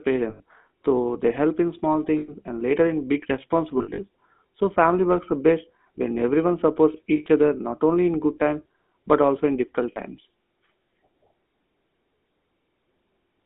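The whole clip runs through a GSM full-rate codec, band-limited to 200 Hz–3.6 kHz, giving the speech that plainly audible buzzy, gravelly roughness.

Lost GSM frames, patched by repeating the last good frame, ring metallically at 0.3 s, 2.18 s after "they help in small", 3.78–4.0 s after "and later in big" in scattered bursts, 7.16 s, and 9.92 s after "but also in difficult".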